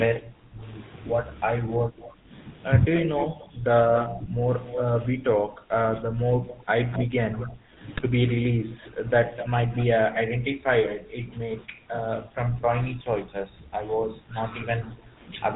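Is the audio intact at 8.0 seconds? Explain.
No. From 7.94 to 8.07 s, GSM bit errors corrupt the decoded speech. Flipped bits land in the filter, pitch and gain parameters, so for a few frames the spectrum warps and the level jumps, producing squawks, pops and a gargling break in the voice. Underlying this, the GSM full-rate codec is plainly audible throughout. It resynthesises speech through a vocal-tract filter driven by sparse regular pulses, which fits a 13 kbps stream. Nothing above 4 kHz survives, and the voice takes on a buzzy, gravelly roughness.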